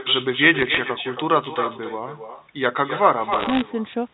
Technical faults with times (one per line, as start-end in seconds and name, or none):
0.00-4.13 echo with no canceller
0.59-0.78 bit errors on a digital phone line
3.32-3.62 bit errors on a digital phone line